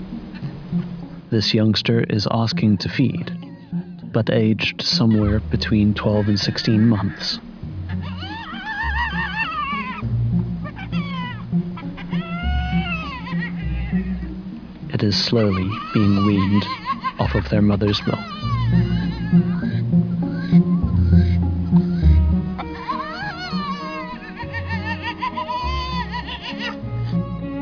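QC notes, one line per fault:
No faults heard anywhere in this clip.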